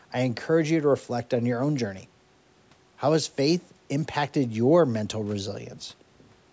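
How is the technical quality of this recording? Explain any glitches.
No glitches or technical faults are audible in this recording.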